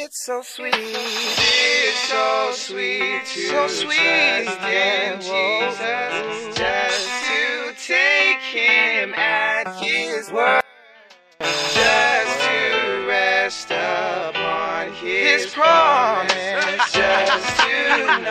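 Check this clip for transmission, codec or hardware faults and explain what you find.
There's one fault worth flagging. From 10.61 to 11.41 s, about 0.8 s, the sound suddenly drops by about 32 dB to a faint remnant. That's the signature of one channel inverted, likely the cause here: with one side's polarity flipped, everything shared by both channels cancels when they're summed to mono, leaving only the faint difference between them.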